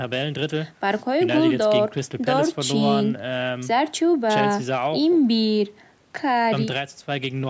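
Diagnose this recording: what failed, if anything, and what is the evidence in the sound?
Nothing has failed here: the speech has just been through a call's microphone processing, which trims away the lowest bass and leaves nothing above 8 kHz, and that's simply how that path normally sounds.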